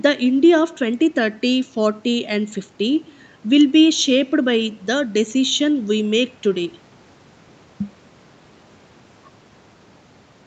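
No technical faults can be heard anywhere in the speech. The sound carries the narrowed band of a call path, with nothing above 8 kHz, consistent with the microphone processing and the Opus call codec working as intended.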